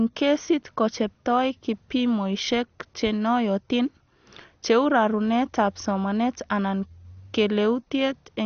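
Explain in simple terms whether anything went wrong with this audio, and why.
MP2 compression, heard throughout the speech, is the likely cause of the dull, gurgling sound. This format splits sound into narrow bands and, when squeezed hard, switches the top ones off entirely, leaving nothing above 6.5 kHz, while the remaining bands turn grainy and bubbly.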